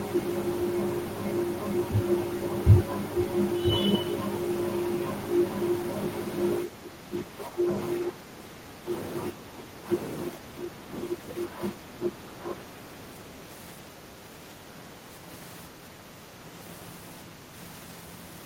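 Speech clip with speech suppressed in double talk from 6.65 to 12.79 s: the voice repeatedly ducks, by around 15 dB at its deepest, for roughly 5 s in total. This is likely an echo canceller unable to separate near-end talk from overlapping far-end echo and attenuating both.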